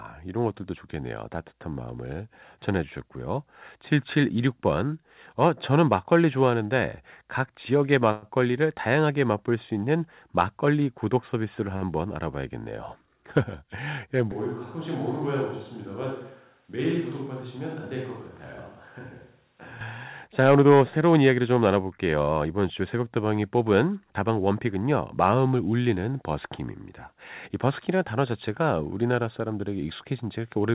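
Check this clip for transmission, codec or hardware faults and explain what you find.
Four faults can be heard in this speech, all of them in the transmission or capture chain, heard through a narrowband call path whose sound stops at about 4 kHz, which points to G.711 mu-law at 64 kbps.

From 8.12 to 8.25 s there is a call audio freeze: the last sound hangs on as a fading buzz for about 104 ms, then the speech resumes exactly where it left off. This is likely packets held up in transit so that the jitter buffer ran empty, with the receiver filling the gap rather than losing anything.

At 11.76 to 11.85 s a short stall from a late packet stretches one sound for 52 ms, with a faint buzzy dip. One packet missed its slot, so the receiver extended what it already had until it arrived, then carried on with nothing missing.

From 14.32 to 19.81 s the speech abruptly turns hollow and roomy, roughly 10 dB quieter and thinner in the bass, with room noise only about 35 dB below it, then snaps back. 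This is a switch to a distant microphone, likely because the close microphone's signal dropped out.

From 20.40 to 21.76 s the speech sounds hurried but keeps its pitch, running at 108% speed. This is a jitter buffer speed-up: with too much audio queued, the receiver trimmed many short pitch-period pieces, roughly a tenth of a second in total, to cut delay.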